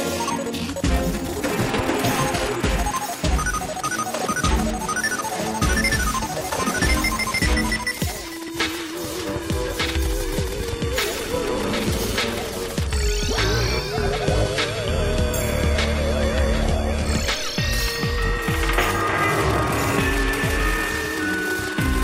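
At 0.3, 5.2, 8.48 and 10.38 s the sound jumps ahead, roughly 40 ms lost at the first and about 20 ms at each of the others. No gap, just a splice. It's likely a dropped buffer (overrun), with samples overwritten before being read.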